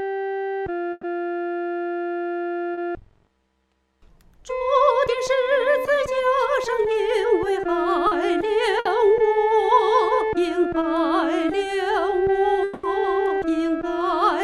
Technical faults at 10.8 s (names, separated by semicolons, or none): short concealed packet loss